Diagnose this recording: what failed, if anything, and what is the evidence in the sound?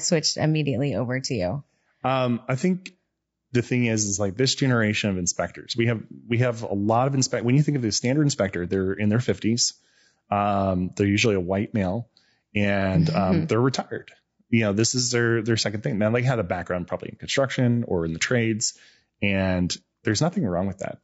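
Codec stage: throughout the speech, voices sound rough and grainy with noise between harmonics, likely low-delay AAC compression at about 32 kbps, unlike packet loss, which would drop out intermittently.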